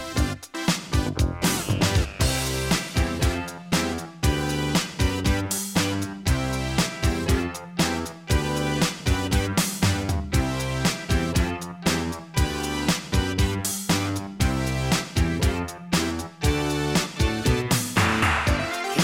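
No technical faults can be heard anywhere in the recording.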